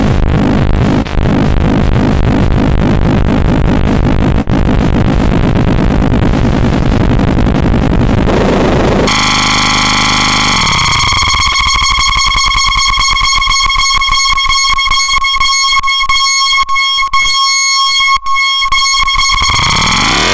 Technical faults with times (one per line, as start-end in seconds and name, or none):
1.02-1.07 short concealed packet loss
4.41-4.49 burst of packet loss
6.83-6.86 short concealed packet loss
11.52-11.56 short concealed packet loss
15.02-15.10 burst of packet loss
17.22-17.26 short concealed packet loss